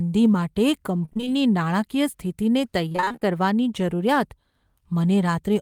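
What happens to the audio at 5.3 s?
Nothing goes wrong at 5.3 s; the speech there is intact, with no dropout, click or distortion.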